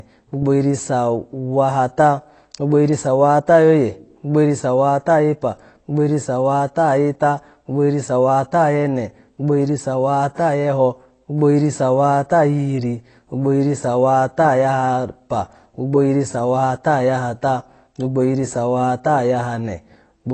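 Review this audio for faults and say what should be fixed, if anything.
AAC compression throughout: nothing above 8.3 kHz, with dull, smeared speech and fizzy sibilants, likely from AAC-LC at a low bitrate around 24 kbps. Encode at a higher bitrate or keep a lossless master.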